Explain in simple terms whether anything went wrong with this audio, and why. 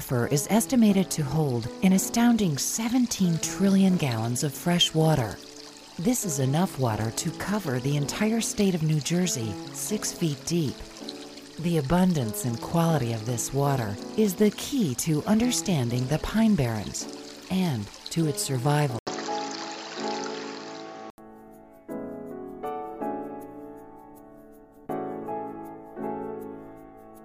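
At 18.99 seconds the sound briefly drops out for 80 ms, then comes back duller and boxier, with nothing above 7.6 kHz, at a slightly different level and with faint new background noise, until 21.18 seconds. That is the sign of an input switched to a poorer device, likely the recording moving to another microphone or headset. Unlike a simple dropout, the sound continues with a different character, and unlike a muffling filter, the loudness and background noise change too.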